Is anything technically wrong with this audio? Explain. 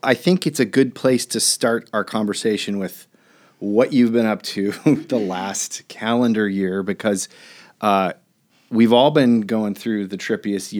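No, no technical faults are audible.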